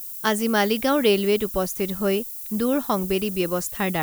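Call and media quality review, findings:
Low bit depth with noise shaping, whole speech clip: steady thin hiss climbing sharply toward the top band, fits 6-bit quantisation with error fed upward, noise fairly close to signal level.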